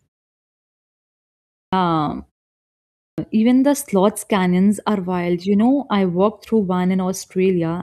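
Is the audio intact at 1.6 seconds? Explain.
No. The sound at 1.6 s starts abruptly out of silence, missing its first 0.23 s. This clipped start after a pause spans 1.50 to 1.73 s and happens because the output device slept through the 1.5-second pause and needed time to wake.

That moment also falls inside repeated timing corrections running from 0.41 to 7.60 s. The receiver keeps trimming short pieces to match a sender playing at 104% speed.

Behind those corrections is clock drift between sender and receiver. The sender's clock runs roughly 4% fast, so the jitter buffer keeps overfilling and forces those small cuts.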